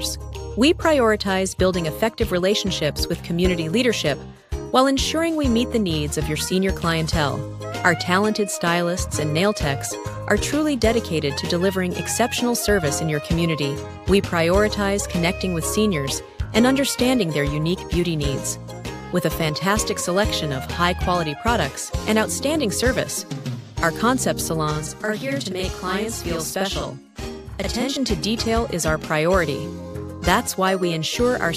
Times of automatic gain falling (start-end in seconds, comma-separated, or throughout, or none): none